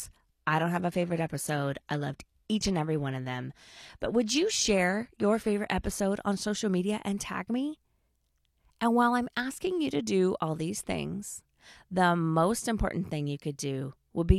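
Speech, opening on an adaptive stream starting at a low bitrate. Until 6.0 s the treble sounds thin and synthetic, which fits 24 kbit/s HE-AAC. Quality then jumps with no gap to a band reaching 14.9 kHz, consistent with 96 kbit/s AAC-LC. That single gapless step up separates it from a dropout or a fixed band limit.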